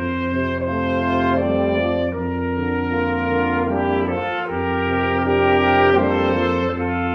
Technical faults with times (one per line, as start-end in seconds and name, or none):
none